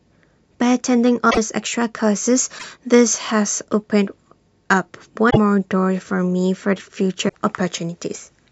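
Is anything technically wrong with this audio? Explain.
Yes, there are four short garbled glitches in this speech, at 1.29–1.38, 2.58–2.64, 5.29–5.37 and 7.28–7.35 s, each lasting 70–85 ms. At each one the sound lurches forward. That most likely comes from a broken MP3 bit reservoir. Frames were dropped, and the next frames borrowed data that wasn't theirs, which fits roughly three 26.1 ms frames decoding as junk.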